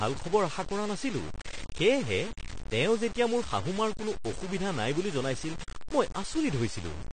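Two faults run through the whole speech clip, from start to finish.

The first is low bit depth without dither. The speech sounds grainy and harsh. Quiet passages turn gritty, and the softest sounds sputter or drop out between steps. The distortion moves with the voice rather than sitting underneath it as a steady hiss. The error is loud, roughly 15 dB below the signal. The likely cause is truncation to very few bits with no dither, which fits about 5 bits.

The second is AAC compression. Nothing is heard above 9 kHz, so the top end is cut off and the speech sounds dull. The codec damage is plainly audible. Sibilants fizz and smear, and sustained sounds warble. These are the marks of a coder starved of data and quantising coarsely against its hearing model. The likely cause is AAC-LC at a low bitrate, consistent with about 32 kbps.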